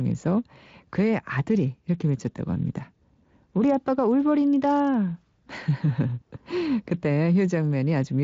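No technical faults can be heard in this speech; it carries the light, expected character of a Speex encoding, with nothing above about 7.6 kHz.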